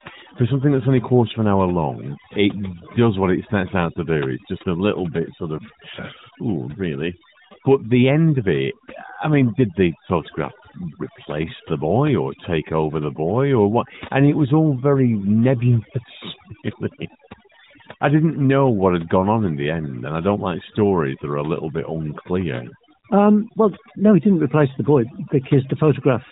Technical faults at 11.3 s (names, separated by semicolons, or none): overdone noise removal